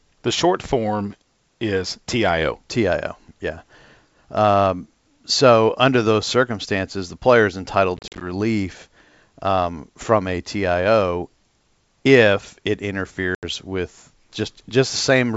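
Hard-edged gaps with brief distortion on return at 7.97 to 8.24 s, after "circumstances the player is", and 13.35 to 13.44 s, after "if it": packet loss on an ADPCM call, leaving the decoder's predictor briefly out of step.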